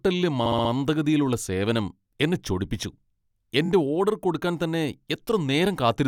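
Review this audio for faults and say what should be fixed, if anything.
Repeated frames stutter the speech at 0.45–0.70 s, where a 64 ms block plays four extra times (adding 256 ms), and at 3.65–3.69 s, just before "ഓഡർ കൊടുക്കാൻ തന്നെ", where a 21 ms block repeats twice. Both show as identical tiled waveform segments. Prevent it by fixing the encoder or transport so each compressed frame is written once, and by checking frame timestamps for duplicates.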